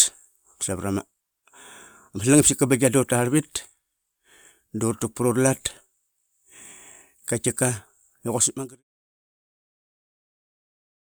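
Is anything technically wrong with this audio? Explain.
No, nothing here is wrong, and the gentle fade-out that begins around 8 s and ends at 8.83 s is just a normal editing touch.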